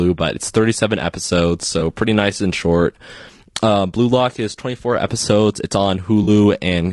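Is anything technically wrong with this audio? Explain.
Yes. Two problems can be heard in this speech clip.

Low-delay AAC compression runs through the whole recording. The speech sounds rough and grainy, and the damage is plainly audible. This is likely AAC-ELD, the low-delay AAC used in video calls, at a bitrate around 32 kbps. It codes each short frame as a few hundred frequency lines. With so few bits, noise fills the gaps between harmonics. The top band comes out lowered or synthetic.

AAC frame loss with concealment happens twice. The first is at about 1.79 to 1.82 s and lasts about 20 ms, which fits one lost frame. The second runs from 6.23 to 6.29 s, about 40 ms, which fits two lost frames. In each gap the decoder rebuilt the missing audio from the last good spectrum, using scrambled signs or interpolated energy. Both losses are short, so each leaves a brief smeared, noisy or phasey patch.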